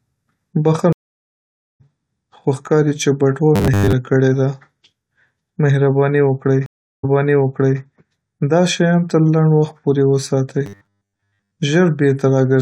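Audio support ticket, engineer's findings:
Stream reconnect, 0.93 to 1.81 s: speech drops out for 0.87 s, then resumes roughly half a second further on, so that stretch of speech is lost. Network/player layer. Connection dropped, player reconnected and restarted the decoder mid-stream.

Stream reconnect, 6.66 to 7.80 s: 0.37 s silence, then playback jumps back 0.77 s and repeats already-heard speech. Same mechanism. Server resent a burst of buffered audio on reconnect, which the fresh decoder played again.

Robotic sound from repeated short buffers, 3.56 to 3.93 s: speech turns into a rigid, metallic buzz at a fixed 100 Hz pitch, loosely tracking the syllables. Likely buffer underrun in the playback path. A 100 Hz buzz fits a 10 ms chunk looped, with roughly two-thirds of the real audio skipped.

Robotic sound from repeated short buffers, 10.66 to 11.56 s: the same 100 Hz metallic buzz over nearly a second of speech. 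Likely the same starved buffer. The last 10 ms or so is repeated in place of about 70% of the incoming audio.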